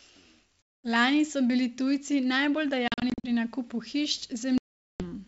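At 0.62 to 0.87 s, 2.88 to 3.27 s (scattered short gaps, none over 40 ms) and 4.58 to 5.03 s there's packet loss on an ADPCM call: silent holes, then slightly distorted speech as the decoder's predictor catches up, over wideband audio that fits 64 kbit/s G.722.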